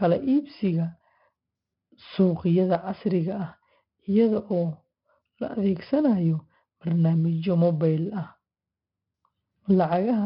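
Throughout, heavy 4-bit ADPCM compression: coarse 4-bit steps add gritty hiss that follows the speech level and roughen sharp attacks, with nothing above 5.3 kHz.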